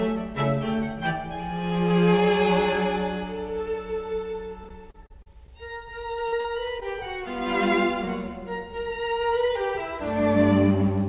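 From 4.64 to 5.51 s there is repeated packet loss with a robotic sound. Six gaps, the longest about 36 ms, are patched by extending the preceding audio, so roughly a sixth of that stretch is filled in. Because the holes come in quick succession, the sound turns choppy rather than showing a single blip.

Short concealed packet loss follows at 6.28–6.35 s and again at 6.40–6.47 s, each about 40 ms. These are two isolated fills, each heard as a brief smear or wobble that blends back into the real audio, not a sustained robotic run. All of this sits on band-limited sound with nothing above 4 kHz, which fits a G.711 call codec.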